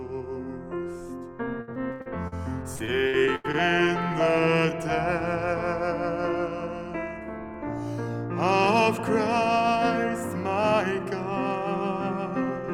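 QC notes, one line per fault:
1.61–2.34 s and 2.76–3.55 s, repeated packet loss (robotic sound): In both stretches, short chunks of audio keep dropping out, up to 85 ms each. Each gap is bridged by repeating the last bit of sound, so about a third of each span is filled-in material and the result is choppy. A spectrogram shows smeared, frozen harmonic bands with abrupt edges. The waveform shows repeated identical cycles between clipped-off segments.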